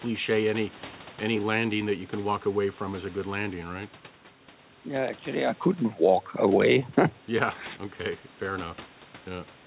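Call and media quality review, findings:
No call or media quality findings for this speech clip.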